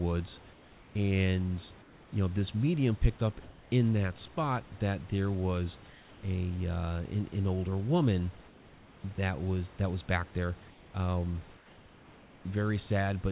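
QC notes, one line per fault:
0.53–0.95, 1.82–2.12 (before "you know this medium"), 5.9–6.23, 10.7–10.94 (after "that was back there") and 11.57–12.44 s (after "was back there um"): comfort noise in place of the background. The room tone in each pause is swapped for a steady, featureless hiss about 2–3 dB quieter, likely from discontinuous transmission in the call. On a spectrogram it shows as a smooth, uniform band with no texture, and on a waveform as a flat, slightly lower noise floor.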